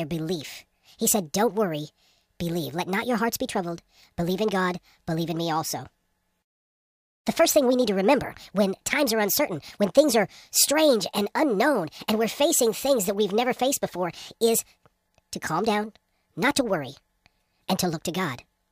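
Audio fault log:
Throughout: wrong sample rate. The speech runs 1.5 times fast and sits about 7 semitones high, which fits 32 kHz audio being played back at 48 kHz.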